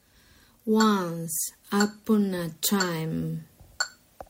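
Nothing goes wrong anywhere in this clip; there's no technical fault to point to at any moment.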